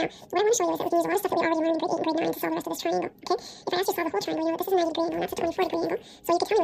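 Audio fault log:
Throughout: audio read two samples at a time (double speed). The whole clip plays twice as fast as it should and sits a full octave, 12 semitones, above its proper pitch, giving a hurried, chipmunk-like character from start to finish. The cause is a reader that treats each consecutive pair of samples as a single frame, as if the stream held two channels or samples twice as wide, so every second of real audio is consumed in half a second.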